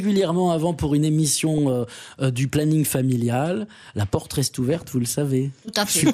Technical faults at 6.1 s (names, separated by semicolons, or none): MP2 compression